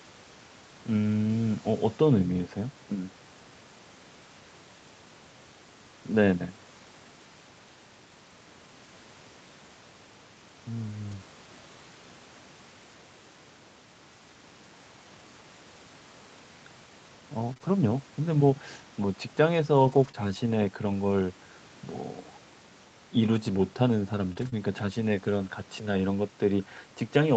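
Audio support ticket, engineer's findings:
Lost packet rebuilt from error correction, 11.11 s: one brief rougher, noisier patch, about 20 ms, no dropout. Opus in-band FEC at receiver; next packet's low-bitrate copy decoded in place of the missing one. Spectrogram: short grainier slice, noise filling between harmonics, no blank column. 24.37–24.47 s: same again, about 60 ms rebuilt, which fits three consecutive 20 ms packets recovered from redundancy. Waveform continuous, slightly fuzzier envelope.

Scattered short gaps, 17.53–20.15 s: a few brief ticks and smears, roughly three, each no longer than about 20 ms, with a small share of the stretch concealed. Jitter buffer/packet loss concealment: lost or late packets patched by extending the preceding sound. Spectrogram: isolated short smeared columns where harmonics freeze or blur. Waveform: small repeated-cycle segments with slight discontinuities at the joins.

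Short concealed packet loss, 24.33–24.37 s and 24.49–24.54 s: brief wobble and smear bracketing the FEC-rebuilt stretch. Decoder PLC: no copy available, so about 20 ms each synthesised from prior pitch or shaped noise, then crossfaded back into real audio. Spectrogram: harmonics stretched flat, fading into noise. Waveform: periodic copied cycles, decaying envelope. Content stays band-limited at 8 kHz throughout, consistent with the wideband Opus call path.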